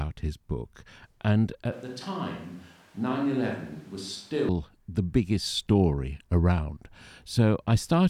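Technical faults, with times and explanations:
1.72–4.49 s, switch to a distant microphone: the close microphone likely dropped out, so speech abruptly turns hollow, roomy and thin, about 10 dB quieter with more background noise, starting at "the biggest story around".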